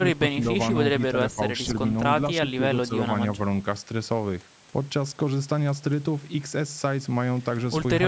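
Speech from a call. The voice briefly dips by roughly 10 dB at 0.0–0.21 s, 1.35–1.39 s, 2.57–2.65 s and 2.87–2.95 s. The likely cause is speech suppressed in double talk, with the echo canceller ducking overlapping voices.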